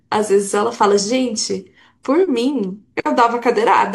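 At 2.24 to 2.29 s compressed frames are skipped: whole coded frames went missing or were rejected, so the speech jumps ahead by about 40 ms. The spectrogram shows harmonics abruptly shifting.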